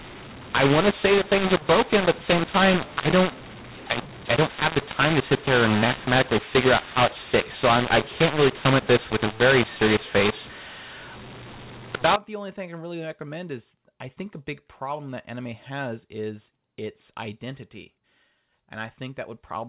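From the start to 12.16 s the speech is harsh and gritty, with pauses filled by hiss. This is mu-law and A-law mixed up: audio coded as mu-law is being read as A-law, scrambling sample levels. Unlike plain clipping or noise, quiet gaps fill with noise.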